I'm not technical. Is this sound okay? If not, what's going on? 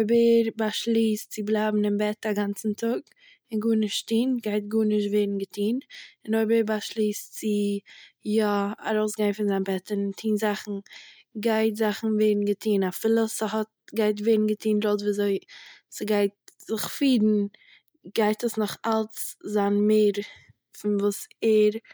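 Yes, nothing in this recording sounds wrong.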